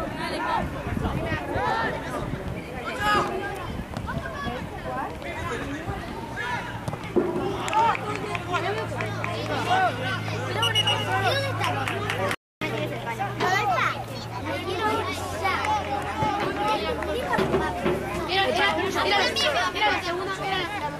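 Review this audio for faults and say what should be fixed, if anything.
The player likely ran out of data or had its thread blocked, causing a playback stall: the sound cuts to silence mid-flow from 12.35 to 12.61 s, a gap of 0.27 s.

The player then resampled its backlog to recover the lost time. This catch-up at higher speed runs at 1.15 times normal from 12.61 to 14.41 s, raising the pitch by about two semitones.

A larger playback buffer, fed by a thread that other work cannot block, would prevent the stall and with it the need to catch up.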